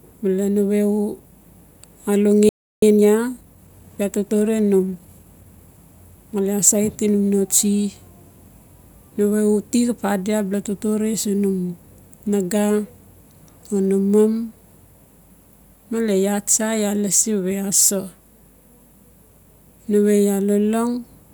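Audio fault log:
2.49 to 2.83 s, playback stall: the speech just cuts out mid-flow for about a third of a second, around 330 ms of dead silence, then picks up again. That gap is most likely the player running dry on data or having its audio thread blocked for a moment, so nothing reached the output until it recovered.
2.83 to 5.83 s, time-compressed catch-up: right after the gap, leading into "male asaiti num no", the speech comes out hurried, about 1.1 times normal speed, for three seconds, yet the pitch stays put. That's the player working off the backlog the stall left behind by snipping out tiny slices and cross-fading over the joins.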